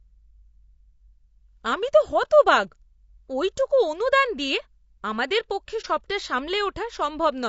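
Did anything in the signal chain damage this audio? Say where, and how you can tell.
Yes, at the codec stage, throughout. The speech sounds rough and grainy, with noise filling the gaps between harmonics and a thin, synthetic top end. That's most likely low-delay AAC compression, AAC-ELD style, and the amount of damage fits a rate around 32 kbps.

There's also a network-side problem: AAC frame loss with muting at 5.81 to 5.85 s. The sound fades out and back in, leaving a soft-edged gap of about 30 ms. That fits one lost frame zeroed by the decoder, with the overlapping windows smoothing the edges.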